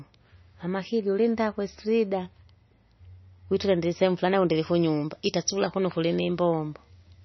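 Throughout, the speech carries heavy MP3 compression damage, likely from a very low bitrate of roughly 27 kbps. With too few bits, the encoder cuts everything above 6 kHz and drops weak spectral lines frame by frame, leaving a watery, swirling texture, chirpy sibilants and smeared consonant onsets.

From 4.55 s to the end, pre-emphasis is left on. A treble boost that fits the 75 µs FM curve was never undone, lifting high frequencies by about 14 dB at 10 kHz relative to 1 kHz, so the speech turns thin, bright and hissy.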